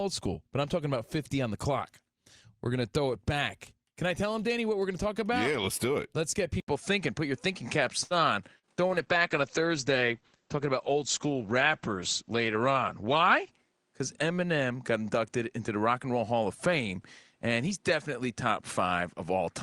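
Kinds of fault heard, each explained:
Input switched to a poorer device: At 6.60 s the recording likely moved to a different, lower-grade input, and that device carries through to the end. An 80 ms gap of silence marks the change. After it, nothing above 10.8 kHz gets through, so the speech loses its airy top and turns duller. A new background noise floor also appears, about 45 dB below the speech. The overall level stays about the same.
Short stall from a late packet: Around 8.03 to 8.14 s, a packet arrived late and the jitter buffer briefly ran dry. Rather than go silent, the receiver stretched the last bit of speech for 71 ms until the data came in, then carried on from where it had paused. Nothing is lost, but that sound is held unnaturally long, and playback now runs 71 ms further behind.
Short concealed packet loss: Between 8.59 and 8.66 s, about 40 ms of the call never reached the decoder. 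The receiver filled the hole with 42 ms of invented continuation, extending the preceding sound, then blended back into the real signal. The result is a brief smear or wobble in the speech.
Call bitrate drop: From 8.88 to 13.61 s, the call's bandwidth estimate collapsed and the encoder was cut from 48 kbps to 12 kbps, staying at the lowest rate for about 4.7 s. At that rate the codec's audio bandwidth shrinks from 20 kHz to 8 kHz. The voice sounds muffled and rough or watery until the bitrate recovers.
Jitter buffer speed-up: Between 12.31 and 12.61 s, too much audio had piled up in the jitter buffer, so the receiver trimmed it down. It removed roughly 40 ms in small pitch-period slices, playing that stretch at about 109% speed. The pitch stays the same, but the speech briefly sounds hurried, as if that phrase were rushed compared with the words around it.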